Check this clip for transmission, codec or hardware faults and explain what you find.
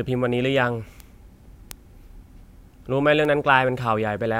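Three bit error spikes occur, at 1.00 s, 1.71 s and 3.25 s. Each is one flipped bit in a single sample, jumping then returning. It gives a sharp broadband tick, peaking near -16, -4 and -16 dBFS.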